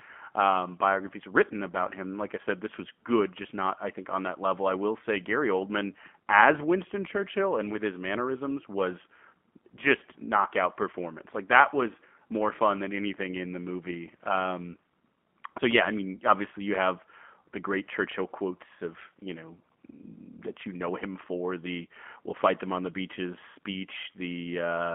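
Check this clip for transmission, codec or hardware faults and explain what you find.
One codec fault runs through the whole clip: the speech has passed through a G.729 codec. From start to finish the audio is confined to a telephone band of roughly 200 Hz to 3.4 kHz, and the damage is plainly audible. G.729 discards the waveform itself and resynthesises each 10 ms frame from a vocal tract filter, a pitch predictor and a few sparse pulses, a model that fits an 8 kbit/s G.729A link. As a result the speech sounds muffled, slightly rough and synthetic, with a buzzy, processed texture.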